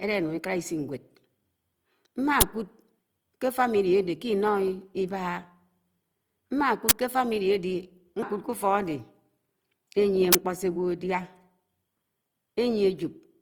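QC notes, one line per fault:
Throughout, Opus compression: The speech has a plainly audible grainy, rough texture across the full band with no obvious muffling. This likely comes from Opus in its music (CELT) mode at about 24 kbps, which fills starved bands with folded or noise content rather than leaving gaps.
2.41 s, 6.89–6.91 s and 10.33–10.35 s, uninitialised buffer: Three short, loud bursts of digital noise, lasting about 10 ms and then 21 ms twice. Stale memory was played out as audio before real samples arrived, which fits one 512-sample block followed by two 1024-sample blocks.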